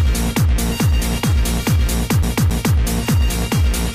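A scratch made the CD player get stuck on one turn, throwing the laser back each revolution, so from 2.23 to 2.77 s the audio repeats a 0.27 s loop twice with short mutes, a fast, even skip.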